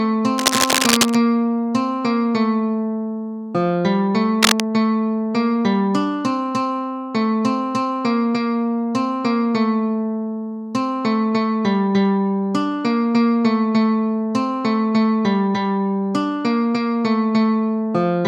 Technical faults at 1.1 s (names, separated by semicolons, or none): cable scratch noise